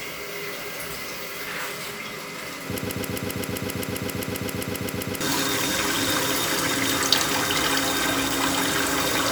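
From 2.78 s to 5.21 s the sound sticks in a broken-record loop. A fragment about 132 ms long repeats exactly, back to back, 18 times. The likely cause is a stalled player or stream resending its last buffer. Whatever should have played there is lost.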